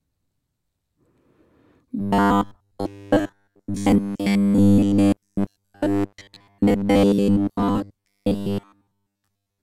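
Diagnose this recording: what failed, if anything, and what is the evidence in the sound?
Robotic sound from repeated short buffers from 1.99 s onward. A rigid 100 Hz buzz likely means a driver buffer is repeating 10 ms blocks in place of most of the speech.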